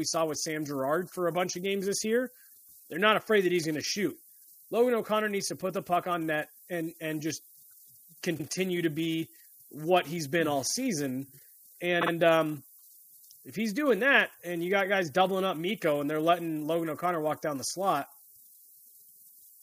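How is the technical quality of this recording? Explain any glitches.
The recording has two technical problems: a constant shaped hiss and two short stutters.

Low bit depth with noise shaping runs throughout. The speech sits at what sounds like about 9 bits, and the rounding error has been pushed upward in frequency, so a thin hiss, only roughly 20 dB below the speech, climbs steeply toward the top of the band.

Repeated frames occur at 8.37 to 8.45 s, just before "to be what he's", where a 78.4 ms stretch plays twice, and at 12.01 to 12.11 s, where a 52.2 ms block plays three times. The decoder is replaying compressed frames, heard as a stutter.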